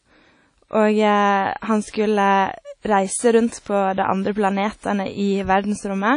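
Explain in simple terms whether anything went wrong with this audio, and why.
The audio was most likely squeezed through WMA compression at a low setting, which throws away detail to save space. Throughout the speech, nothing above about 10.1 kHz survives, so it sounds dull, with a washy, ringing haze and hiss that rises and falls with the voice.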